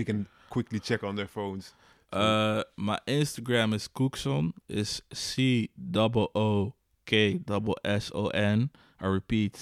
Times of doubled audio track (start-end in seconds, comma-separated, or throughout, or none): none